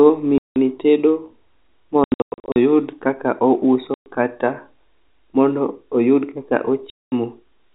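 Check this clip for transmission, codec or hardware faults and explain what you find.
Packet loss filled with silence is the one fault in this speech. Hard-edged dropouts occur at 0.38–0.56 s, 2.04–2.56 s (scattered gaps, longest 100 ms), 3.94–4.06 s and 6.90–7.12 s. Their lengths step in 20 ms units, which fits 20 ms packets lost and replaced by silence. The G.711 telephone band limit at 4 kHz is audible throughout.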